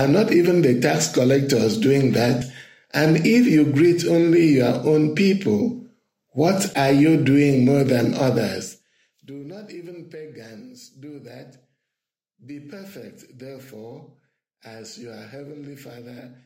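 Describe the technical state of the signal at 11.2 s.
At 11.2 s the signal is intact, with no dropout, distortion or other fault.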